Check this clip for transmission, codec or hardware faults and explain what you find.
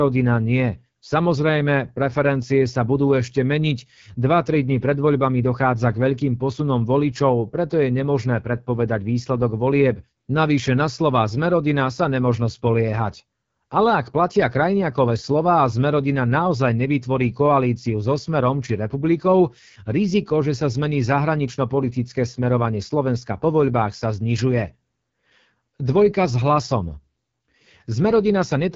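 One codec fault runs through the whole recording: the speech has been carried by the AMR wideband (HD Voice) codec at a low rate. Throughout, the voice sounds rough and raspy, which fits one of the two lowest AMR-WB bitrates, around 8.85 kbit/s. Only the band up to 6.4 kHz is modelled from pulse excitation, with shaped noise filling above that. A spectrogram shows smeared harmonics, a noisy upper band and nothing above 7.5 kHz.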